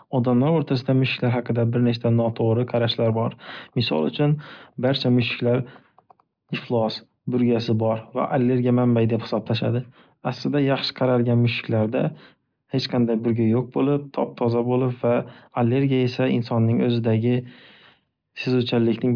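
No technical faults turn up anywhere in the recording, so there is nothing to describe in time order.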